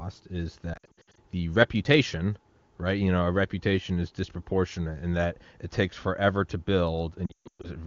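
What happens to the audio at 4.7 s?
Nothing goes wrong at 4.7 s: the speech there passes intact through the AMR wideband (HD Voice) codec, which sounds clear, as expected at its highest rate.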